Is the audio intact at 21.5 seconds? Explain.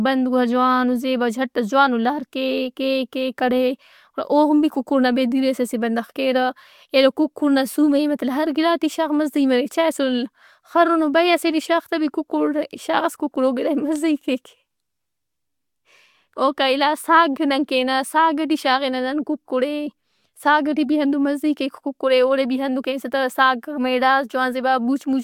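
Yes, at 21.5 seconds the speech is intact, with no dropout, click or distortion in the sound at that point.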